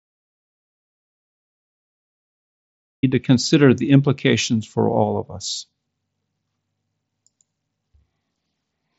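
Dead digital silence, with no room tone at all, fills the start of the speech clip until 3.03 s, when the sound comes back mid-flow on "to consider the implications". This is an audio dropout to silence, likely the input link failing while the recorder kept writing silence. Whatever came before is lost. The speech that follows passes through an mSBC Bluetooth headset codec, with nothing above about 7.7 kHz.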